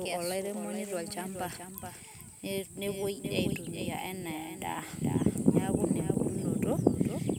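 From the start to the end, the speech has a doubled audio track: a second full-band copy trails the original by roughly 0.4 s, about 10 dB quieter, with no decay or room colour. This likely comes from a slower capture path picking the same audio up again.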